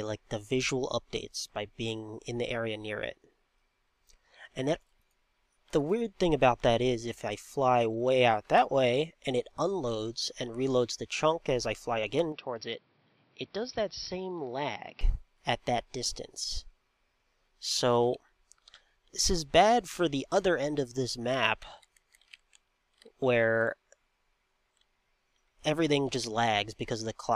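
From 12.32 to 15.01 s, input likely switched to a poorer device: sound dulls, losing everything above 5.7 kHz, drops slightly, and gains faint noise.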